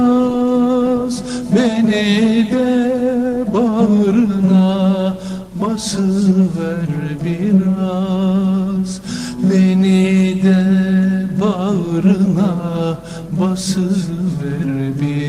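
No technical faults can be heard anywhere in the audio; the signal stays steady and intact throughout.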